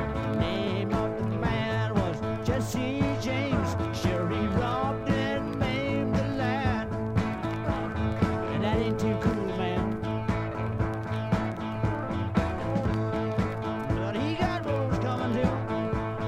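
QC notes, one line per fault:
Nothing stood out on a careful listen, and no problems were heard at any point in the audio.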